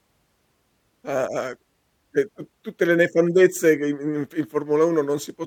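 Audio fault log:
5.44 to 5.46 s, damaged data in a compressed stream: right at the tail there's a short blip where a bit of the encoded stream got mangled, so the decoder misread those frames and lost sync before it found its footing again.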